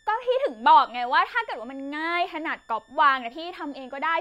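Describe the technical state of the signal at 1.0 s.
At 1.0 s the speech carries a switching supply whistle, present throughout the clip rather than starting or stopping here. A nearby switch-mode power supply running in an audible burst mode, or beating against another supply, leaks a tone into the signal path. It sounds as a thin high whistle sitting roughly 40 dB below the speech, its pitch wandering between 1.64 kHz and 1.86 kHz.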